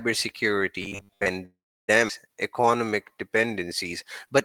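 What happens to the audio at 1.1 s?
At 1.1 s the speech sits inside robotic sound from repeated short buffers, from 0.82 to 1.31 s. It turns into a rigid, metallic 100 Hz buzz. That fits a 10 ms slice repeated, likely because new audio arrived too seldom. Most audio is skipped.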